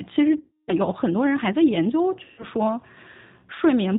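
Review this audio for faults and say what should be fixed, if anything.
The whole clip passes through the G.729 codec, whose sound fits its 8 kbit/s rate. It rebuilds speech from a vocal tract filter, a pitch predictor and sparse pulses, and discards everything above 4 kHz. The speech is plainly rough, synthetic and band-limited throughout. Use a wideband codec such as G.722 or Opus, at a higher bitrate, wherever the network allows.

VoIP packet loss concealed by the speech codec occurs from 0.40 to 0.73 s, covering about 280 ms of lost audio, and again from 2.24 to 2.45 s, covering about 140 ms. The gap lengths fit 20 ms packets. During each gap the decoder extends its last pitch and filter state at falling gain, so the speech smears into a fading buzzy tone or coloured noise and stays weak and distorted briefly after packets resume. Add forward error correction or redundancy, and fix the loss on the network path.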